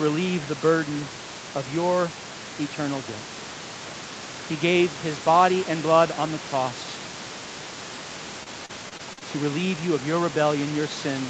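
Speech recorded through a call path, with repeated packet loss between 8.43 and 9.23 s, just before "to relieve you of." Six short gaps, the longest 39 ms, were patched by extending the preceding sound, leaving about a fifth of that span concealed and sounding choppy and robotic. The band stops at 8 kHz, which fits an Opus call codec, and room noise sits about 16 dB below the speech.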